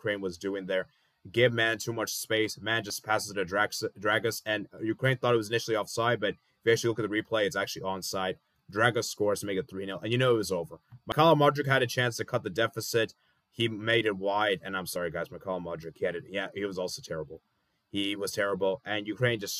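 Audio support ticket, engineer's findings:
Abrupt forward skips at 2.9 s, 11.12 s (longer jump, roughly 70 ms) and 14.96 s (roughly 20 ms each). Likely dropped buffer (overrun): capture not read in time, overwritten blocks lost, edges spliced.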